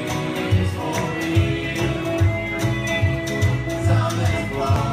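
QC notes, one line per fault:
4.76 s, damaged data in a compressed stream: a brief blip near the very end, where corrupted frame data made the decoder misread what it received and resynchronise on the next valid frame.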